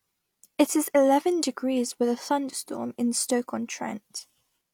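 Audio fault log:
1.43–1.46 s overlap between stream segments: two segments claimed overlapping time stamps, so the player discarded about 35 ms of speech that was not actually duplicated. The waveform jumps between "is eleven" and "with a thunderstorm in", giving a short skip.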